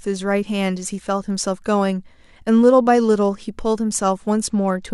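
From 4.46 s to the end, the speech turns dull and gritty in a Bluetooth SBC bit pool drop, which fits the pool falling from 31 to 11, near 83 kbps. Unlike a plain low-pass filter, the lost treble comes with coarse quantisation noise.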